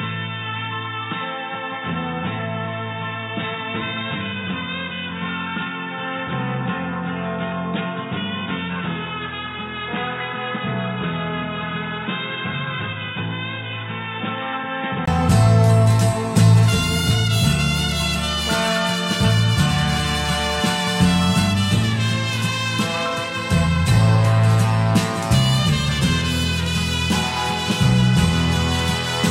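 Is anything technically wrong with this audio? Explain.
Yes, there's one problem. From the start up to about 15.08 s the audio sounds like it's coming through a poorer input device, likely because the system had switched to a different microphone or a headset's call profile. That section has nothing above 3.8 kHz, so it's dull and boxy, sits roughly 10 dB quieter, and carries its own faint background noise well below the signal. At 15.08 s there's a 20 ms silence, then the full, clearer sound returns.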